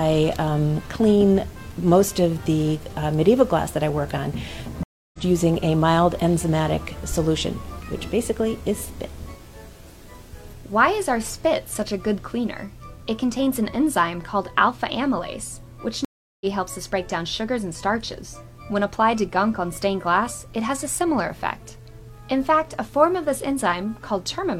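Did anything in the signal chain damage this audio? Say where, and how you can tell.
Yes. Two stream reconnects at the network stage. Silence at 4.83 s (0.3 s) and 16.05 s (0.36 s), then a fresh decoder resumes the sound roughly 0.2 and 0.3 s later.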